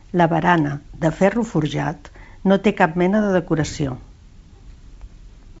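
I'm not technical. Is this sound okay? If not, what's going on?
No. Right after "barana de ferro", from about 1.82 to 1.87 s, there's a short rough crackle with a brief change in level. That's bit errors on an ADPCM link: a few bits of the digital phone signal got corrupted, and the decoder stays confused for a few milliseconds while it recovers. Unlike a simple click or a silent dropout, it's a gritty burst that smears on briefly. The wideband phone sound around it is clear.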